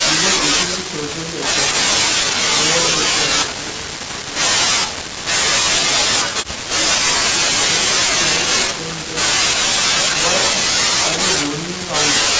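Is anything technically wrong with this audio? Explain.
Yes. From 3.10 to 3.88 s the speech drops by roughly 15 dB with zipper noise. The level falls in 3 dB steps, about seven per second, unsmoothed, so each jump clicks audibly. A waveform shows a staircase envelope; a spectrogram shows thin vertical broadband lines at each step.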